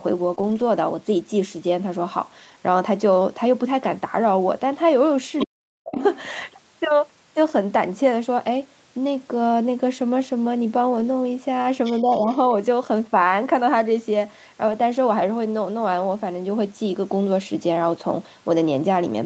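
Between 0.35 and 0.42 s there is short concealed packet loss. About 20 ms of audio failed to reach the decoder in time. The receiver covered the hole with roughly 12 ms of sound extrapolated from what came just before, then blended back into real audio, stretching the timeline by about 10 ms. The result is a brief smear or wobble, and a very short sound inside that window can drop out.

Overlapping it, from 0.39 to 0.62 s, comes a lost packet rebuilt from error correction, here six lost packets totalling 120 ms. Each was replaced by the low-bitrate backup copy that Opus carries in the following packet, so nothing goes silent. Those 120 ms sound coarser and noisier than the surrounding 32 kbps Opus speech. The same repair returns for 40 ms at 10.96 to 11.02 s and again at 14.68 to 14.74 s, each time as a short patch of rougher, grainier texture.

At 5.38 to 5.47 s the other side's voice is leaking through, most likely because the echo canceller left part of the loudspeaker signal in the microphone feed. 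This leakage sits at about 5 dB below the talker. It recurs at 5.94 to 6.22 s at about 10 dB down, and at 11.84 to 12.01 s at about 20 dB down. Each time a second voice comes through behind the main one.

Between those leaks, from 5.46 to 5.99 s, the speech is suppressed in double talk. With both ends active at once, the canceller likely could not tell its own talker from the echo and attenuated everything. Over roughly half a second the voice sinks by as much as about 40 dB, which is close to cutting out entirely. A milder repeat follows from 12.01 to 12.49 s, where the voice dips by up to about 10 dB for about 0.3 s.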